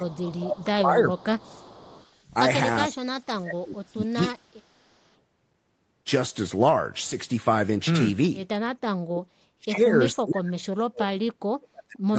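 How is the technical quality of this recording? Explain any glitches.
The recording has two recurring call-path faults, and the whole clip tops out around 8 kHz.

Speech suppressed in double talk shows up from 0 to 1.69 s, 2.88 to 4.36 s, and 8.92 s to the end. The speech dips, deepening from about 20 dB to about 40 dB, likely because the echo canceller ducked everything during crosstalk.

Echo leak appears at 0.13–0.38 s, 1.39–2.19 s and 4.58–5.09 s. A faint copy of the speech trails about 0.45 s behind, likely residual loudspeaker echo slipping past the canceller.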